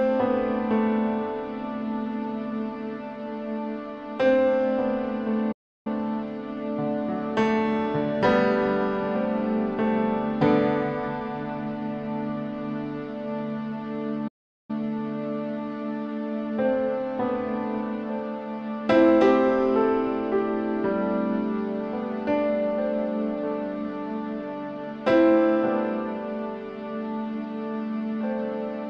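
At 5.52 s the sound just drops out, and it doesn't pick up again until 5.87 s, a gap of about a third of a second. There's a second one at 14.27 s lasting around 0.41 s, ending at 14.71 s. Both are playback stalls. The output goes dead silent mid-flow and then carries on, most likely because the player ran short of data or its thread got held up for a moment.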